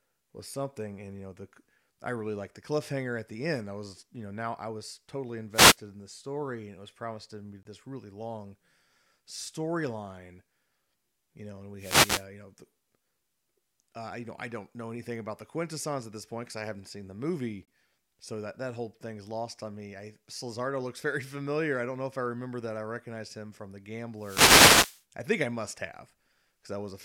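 At 5.52 to 5.77 s, a wireless microphone noise hit occurs. The FM radio link fades as reflected signals cancel. Receiver noise rises over the speech as a brief swish of static. At 7.63 s, a gap between chunks opens for about 23 ms. Silence sits at the join between stored chunks. It sounds like a short hole in the speech. The same noise hit returns at 11.78 to 12.26 s. The second chunk gap falls at 17.65 s, 10 s after the first, matching 10-second chunks. The last noise hit, from 24.17 to 25.04 s, is the longest, nearly a second of static.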